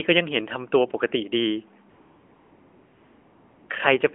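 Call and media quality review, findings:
AMR comfort noise, 1.9 to 3.7 s: real background drops out for about 1.8 s, replaced by smooth, steady synthetic hiss. Probable component: sender-side DTX/VAD. Phone judged the talker silent, stopped sending speech frames, and the receiver filled the gap from a rough level-and-spectrum description. Sits on a narrowband AMR path, nothing above 4 kHz, light codec colouring that fits the 12.2 kbps mode.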